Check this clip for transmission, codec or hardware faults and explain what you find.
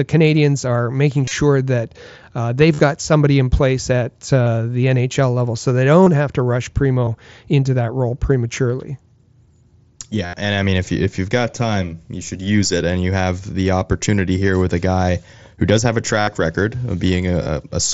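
There is one fault: concealed Bluetooth headset packet loss, with eight events. The speech comes through the mSBC headset codec, band-limited to 8 kHz.

The dropouts fall at 1.25–1.31, 2.74–2.80, 4.43–4.46, 6.04–6.07, 7.05–7.07, 10.26–10.34, 16.22–16.27 and 17.43–17.47 s. Voice packets were lost on the headset link. The receiver filled each gap by repeating the best-matching recent stretch of waveform. Gaps run from 22.5 ms to 75 ms. The longest one, at 10.26 s, gives a steady buzzy tone at full level. A small warble follows as real speech returns.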